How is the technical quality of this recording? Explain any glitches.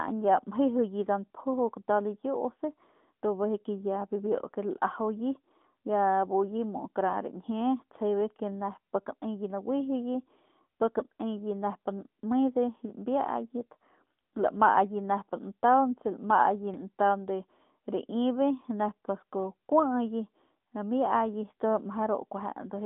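The recording is plainly limited by mobile-phone coding, audible from start to finish.

AMR narrowband mobile codec, throughout the whole clip: the speech has been squeezed into an 8 kHz phone channel and rebuilt from a vocal-tract model fed by a handful of pulses per 5 ms subframe. The band runs from roughly 200 Hz to 3.5 kHz, with nothing above 3.8 kHz, so sibilants turn dull and the voice thins out. The damage is plainly audible as a buzzy, synthetic edge, which fits a mid-rate mode around 10 kbps.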